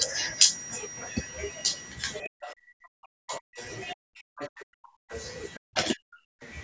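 From 2.22 s to 6.41 s the talker keeps getting squashed, for around three seconds in total, sometimes dipping by something like 40 dB. That's speech suppressed in double talk, likely an echo canceller that couldn't tell the talker from the far-end echo and turned everything down. Meanwhile the other side's voice leaks through: a short scrap at 2.44 s, then 3.28 to 3.64 s and a longer stretch from 4.38 to 5.88 s, both fairly strong, then a faint flick at 6.43 s. That's likely leftover loudspeaker echo the canceller didn't fully remove.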